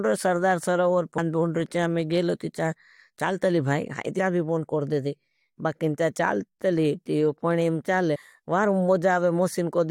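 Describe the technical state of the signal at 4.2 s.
At 4.18 s the speech jumps forward. The fault is compressed frames skipped. Between "चाल तली भाई हाई" and "भी बोंड कर देदे", a short stretch of audio never plays. The decoder lacked those frames or rejected them as damaged. The jump is roughly a tenth of a second, which fits about five frames of 21.3 ms each. At the join the speech is heard jumping ahead past the missing stretch.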